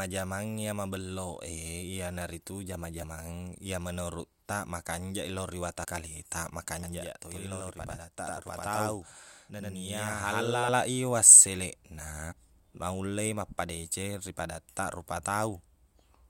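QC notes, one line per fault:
3.02, 5.83 to 5.85 and 12.31 to 12.33: compressed frames skipped. The audio jumps ahead roughly 50, 150 and 100 ms, whole frames of about 23 ms that were lost or rejected.
6.83 to 10.69: channel delay (doubling). One channel lags the other by 92.88 ms, which fits a 4096-sample buffer, and the two are summed to mono, so a second equal-level copy trails every sound as a distinct slap echo.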